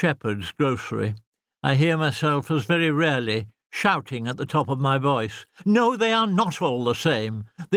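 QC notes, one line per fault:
No faults: the signal carries only the light coding texture of Opus voice compression, with the band extending to full width in a way that fits its hybrid mode at around 24 kbps.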